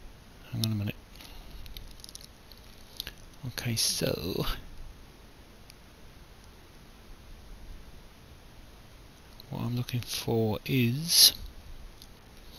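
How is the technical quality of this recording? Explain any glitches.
No glitches or technical faults are audible anywhere here.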